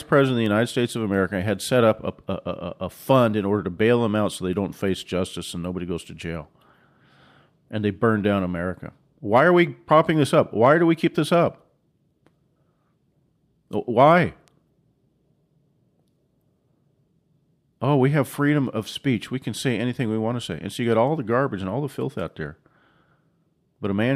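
A sharp, isolated tick at 0.46 s, peaking at about -18 dBFS, and a quieter one at 14.48 s, at about -30 dBFS, cut through the speech. Each is a bit error spike: a flipped bit threw one sample, then roughly three, off by a power of two.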